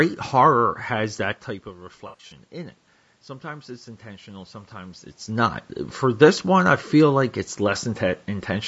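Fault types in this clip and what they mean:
Low-delay AAC compression: The speech sounds rough and grainy throughout, with noise filling the gaps between pitch harmonics. Short codec frames resolve those harmonics poorly. The cause is likely AAC-ELD, the low-delay call codec, and the damage fits a low bitrate near 32 kbps.
AAC frame loss with concealment: From 2.07 to 2.33 s the sound smears into a noisy, phasey patch. About 140 ms of audio is missing, scattered over 240 ms. The decoder rebuilds each gap from the last good spectrum, so the sound never drops to silence.
Automatic gain rising: From 3.4 to 6.75 s the level slowly swells by about 5 dB. The speech and the room noise rise together. The gain control is reacting to a quieter input, down about 13 dB as the talker's level at the microphone drops.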